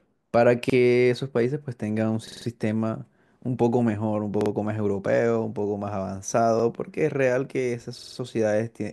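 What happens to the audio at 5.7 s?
Nothing goes wrong at 5.7 s; the speech carries on intact through that moment, with no dropout, click or distortion.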